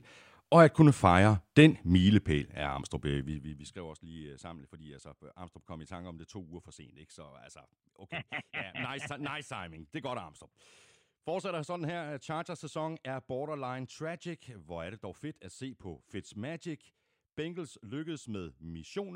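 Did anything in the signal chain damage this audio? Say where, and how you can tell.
Yes: zipper noise ticks on the speech from 3.14 to 3.84 s, before "også lige øh sammen", as a per-buffer gain stage drops level about 20 dB in unsmoothed 2 dB steps.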